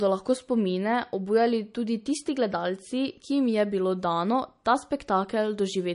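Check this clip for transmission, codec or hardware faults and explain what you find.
One fault runs through the whole clip: the speech carries audible MP3 compression damage, most likely from encoding at a low bitrate. The sound points to something around 40 kbps. Short of bits, the encoder has removed everything above 10.6 kHz, leaving the top end dull and closed-in. It has also dropped quieter frequency components that come and go between frames, so the speech takes on a watery, swirling texture, with chirpy sibilants and softened consonant onsets.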